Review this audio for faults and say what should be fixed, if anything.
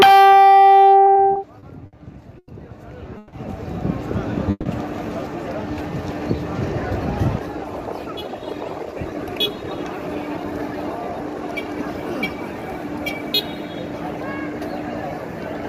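Repeated stalls (stutter) run from 1.05 to 1.95 s. The buffer emptied five times, and about 140 ms of held sound was filled in, with the longest wait 60 ms.

A short stall from a late packet comes at 2.39 to 2.50 s. The sound is held for 90 ms until the packet arrives, then carries on.

Call audio freezes occur at 3.18 to 3.35 s and 4.51 to 4.68 s, each 150 ms long. They likely come from packets held up in transit. The second freeze fades to silence for 30 ms.

A jitter buffer slow-down runs from 5.74 to 6.37 s. Repeated pitch periods add 91 ms, so the sound plays at 87% speed with the same pitch.

A jitter buffer speed-up runs from 8.06 to 11.49 s. The receiver trims about 0.4 s of short pieces, so the sound plays at 111% speed and feels hurried.

To prevent all of these, fix the network path's delay variation and give the jitter buffer a steadier, adequately sized target delay.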